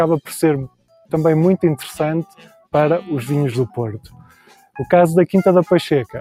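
Throughout, a speech-tuned noise suppressor is acting on non-speech sound. It treats sustained tones and ambience as noise, so its gain swings by around 10 dB. Attacks pass while held parts and decays sink, giving a pumping, thinned texture.

Sound cut by the noise suppressor occurs at 0.68–1.13 s, 2.26–2.74 s and 4.02–4.78 s. In each span the suppressor judged the material to be noise and pulled it down by up to about 21, 15 and 18 dB respectively. Sustained content drops away and tails are truncated.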